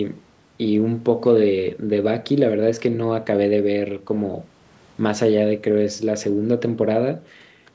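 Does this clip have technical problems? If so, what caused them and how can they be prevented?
No, the speech shows no technical faults; it has passed through normal call microphone processing, which trims the lowest bass and leaves nothing above 8 kHz, as expected for that path.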